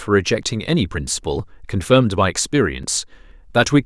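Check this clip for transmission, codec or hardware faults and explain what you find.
The speech has four brief skips, at 0.43, 1.39, 2.83 and 3.31 s. Each is likely audio missing between chunks: a sliver of roughly 20 ms vanishes at a buffer handover and the two sides join with no silence. Unlike random dropouts, the skips fall on a regular half-second grid.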